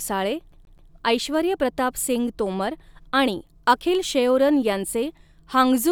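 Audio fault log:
0.52 to 0.91 s, CD stuck on one turn: a 0.13 s slice repeats three times, each jump back leaving a brief mute, before "ऐश्वर्य प्रताप सिंग तोमर". The waveform shows three identical blocks split by silent gaps, a repeating stripe pattern on the spectrogram.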